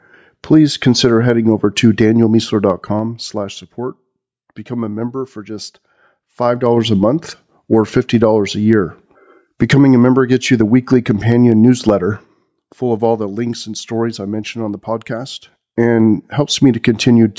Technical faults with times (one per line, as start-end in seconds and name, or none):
0.00-17.39 gain pumping
2.30-3.75 zipper noise
6.40-6.95 zipper noise